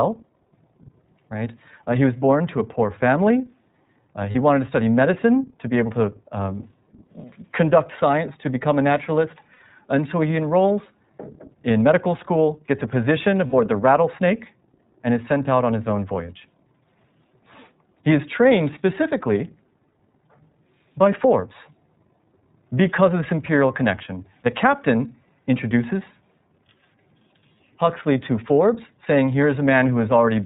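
The whole recording passes through the iLBC codec, a narrowband VoIP coder that codes each frame's excitation without relying on the previous frame. Its framing fits the 30 ms, 13.33 kbps mode. Nothing above 4 kHz survives, so the speech is band-limited. The coding damage is plainly audible as a rough, synthetic texture on the voice throughout.

Lost iLBC frames occur three times: at 4.32 to 4.35 s (30 ms, consistent with one lost frame), at 9.53 to 9.60 s (60 ms) and at 13.47 to 13.54 s (60 ms). The second and third gaps each fit two lost frames. At each gap, the decoder fills the missing audio by repeating the last pitch cycle blended with noise. This sounds like a brief held, buzzy or breathy vowel. Because iLBC frames decode independently, the speech returns to normal almost immediately afterwards.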